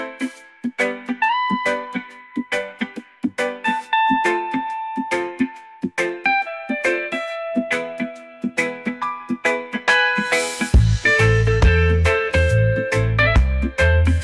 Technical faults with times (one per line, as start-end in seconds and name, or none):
none